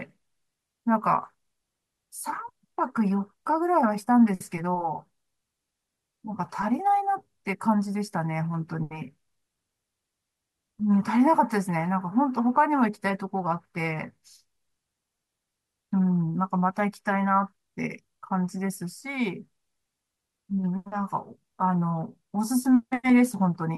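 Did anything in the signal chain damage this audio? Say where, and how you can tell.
No, nothing in the signal chain damaged this audio.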